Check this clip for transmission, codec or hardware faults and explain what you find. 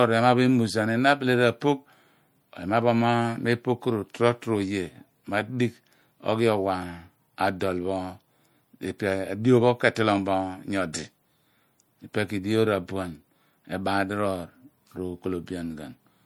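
Two codec faults are audible in this speech.

Throughout, the speech sounds plainly watery and swirly, with a treble cutoff at 21 kHz. This is likely MP3 compression, with weak frequency lines dropping in and out, which fits about 64 kbps.

At 10.93 s, a brief hiss of about 10 ms precedes an attack. That pre-echo comes from quantisation noise spread across the transform block before the sharp onset.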